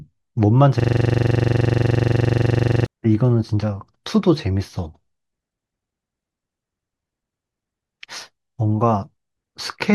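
A system hang loop runs from 0.80 s to 2.86 s in this speech recording. A single 42.67 ms slice of audio repeats exactly, 48 times over, producing a rapid mechanical stutter at about 23.4 Hz. That sound comes from the computer or its audio driver freezing while the sound hardware kept replaying the same ring buffer. The loop length fits a 2048-sample buffer. Once the system recovers, the speech resumes.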